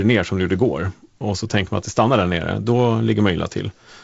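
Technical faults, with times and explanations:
Nothing stood out on listening to this speech, which carries the bandwidth of G.722 wideband telephone coding, with nothing above about 7.7 kHz.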